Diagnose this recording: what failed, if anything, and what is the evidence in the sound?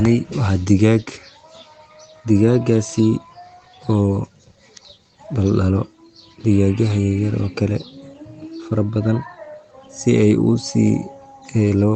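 Nothing failed here: the speech comes through a call path, and the top end stopping around 8 kHz fits an Opus link at a modest bitrate doing its ordinary job.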